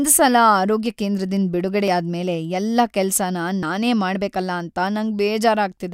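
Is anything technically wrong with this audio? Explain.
Yes. There are two dropped buffers (overruns), at 1.88 s and 3.63 s. The first comes just after "ಸಲ ಆರೋಗ್ಯ ಕೇಂದ್ರದಿಂದ್". The second comes just after "ಮೇಲೆ ಎಲ್ಲ ಕೆಲ್ಸನ". At each point the speech jumps forward by about 20 ms, with no gap of silence. The likely cause is the recording software failing to read a buffer before the hardware overwrote it. The lost piece is simply missing, and the audio on either side is butted together.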